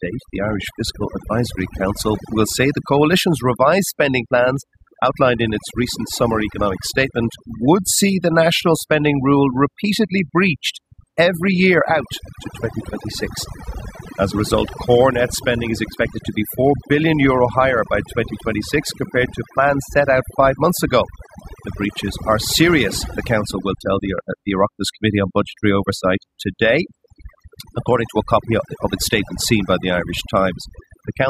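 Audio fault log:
throughout overdone noise removal: noise reduction set too strong mutes frequency bands near the noise estimate, leaving a lowered background that breaks up into twinkling specks.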